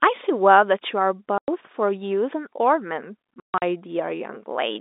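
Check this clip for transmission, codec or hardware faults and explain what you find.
Two stretches of packet loss filled with silence break up the speech, heard over a G.711 telephone line that keeps the sound within about 250 Hz to 3.7 kHz. The first hole runs from 1.38 to 1.48 s and the second from 3.40 to 3.62 s. Packets never arrived and the receiver played silence in their place. The 100 ms first gap fits five 20 ms packets. The second is a scatter of dropouts, the longest about 140 ms. Each gap has abrupt edges. On a waveform the signal drops straight to a flat line. A spectrogram shows clean vertical blank columns.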